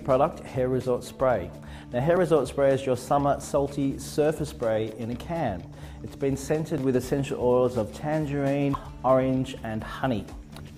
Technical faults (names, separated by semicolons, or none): damaged data in a compressed stream